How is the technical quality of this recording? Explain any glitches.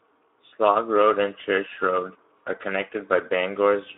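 The speech is held back by plainly audible codec damage that runs the whole length of the clip. It sounds hoarse and grainy, squeezed into a narrow telephone-like band from 300 Hz to 3.6 kHz, with no low warmth and no airy top. The cause is the Speex codec, which rebuilds the voice from a predicted filter plus a coarsely coded excitation. The roughness fits a low setting around 11 kbps, where that excitation is starved of bits.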